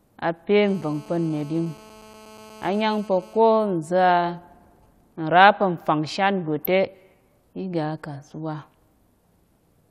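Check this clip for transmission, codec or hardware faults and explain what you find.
Three faults are present: a continuous GSM phone buzz, then GSM signalling bursts, and later a brief spell of DAB burbling.

From 0.62 to 3.57 s a GSM phone buzz runs under the speech at about 24 dB below it. A handset in a call is transmitting bursts at 217 Hz, and the audio circuitry rectifies those radio pulses into the signal path. The result is a hard, raspy buzz, steady and unrelated to the speech. On a spectrogram it appears as a comb of horizontal lines at 217 Hz and its many harmonics, and the waveform shows a regular pulse train.

From 3.68 to 5.13 s GSM signalling bursts follow. They come from a phone in a call whose user is silent, so it transmits only short groups of bursts instead of a continuous stream. Rectified in the same way, they give even ticks with a longer 217 Hz buzz twice a second, very faint at roughly 45 dB below the speech. 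A spectrogram shows intermittent vertical clusters of the same harmonic comb, and the waveform shows isolated pulse groups.

At 6.59 to 6.66 s there is DAB burbling. Weak reception let bit errors slip past error correction into the MP2 audio data, with an error rate well under one percent. Corrupted samples put short blips of noise in single sub-bands, and nine frames were hit. It sounds like a short burst of burbling over the speech, and on a spectrogram it appears as scattered rectangular blocks of energy confined to narrow frequency bands.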